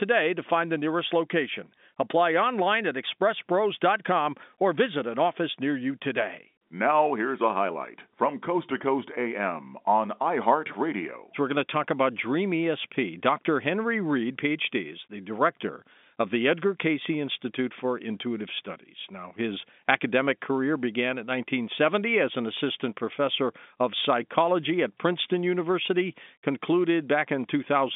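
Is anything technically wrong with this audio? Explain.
No, nothing's actually wrong here: this is speech carried over ordinary G.711 telephone coding, and the narrow line band of about 200 Hz to 3.6 kHz, with nothing above 3.7 kHz, is simply how that format sounds.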